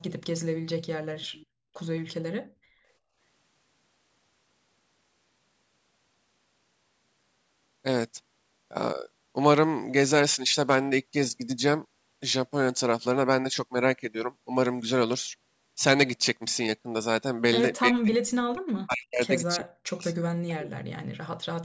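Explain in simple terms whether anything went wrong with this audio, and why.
Between 1.18 and 1.46 s a faint copy of the speech returns about a third of a second late, likely an echo leak from the other end's loudspeaker.

The speech drops almost to silence at 17.89–18.16, 18.51–19.23, 19.56–20.06 and 20.27–20.87 s, likely speech suppressed in double talk while both sides spoke.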